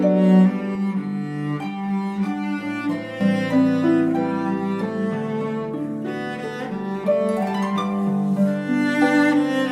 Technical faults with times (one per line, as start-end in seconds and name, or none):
0.75-3.21 channel delay (comb filtering)